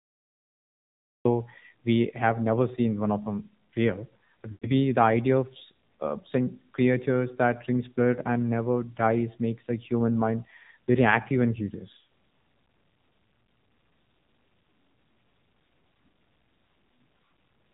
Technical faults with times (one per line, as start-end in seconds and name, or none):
0.00-17.74 AMR narrowband mobile codec
0.00-1.25 cut-off start
4.52-4.68 lost AMR speech frames